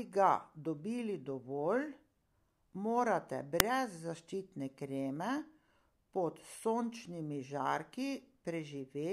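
A corrupt FLAC frame at 3.60 s: flipped bits derailed the predictor from the damaged bit on, giving a brief error peaking about -9 dBFS.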